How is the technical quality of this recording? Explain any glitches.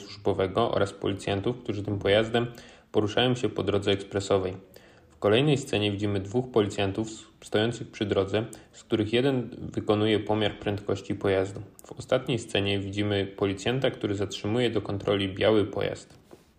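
No glitches or technical faults can be heard anywhere.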